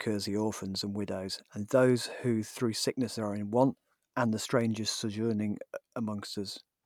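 At 4.61 s a single electrical switching spike cuts into the speech as a brief, sharp snap, over in about a millisecond. It sits on top of the speech rather than replacing it, and peaks well below full scale, at roughly -35 dBFS, so it is a small tick. The likely source is a nearby switch, motor or static discharge arcing once and being picked up by the audio line as a short burst of interference.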